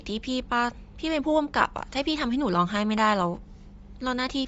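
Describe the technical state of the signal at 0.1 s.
At 0.1 s, as everywhere, the speech carries likely Bluetooth LC3 compression: content stops at 7.7 kHz, and noise-filled gaps give a grainy, breathy edge.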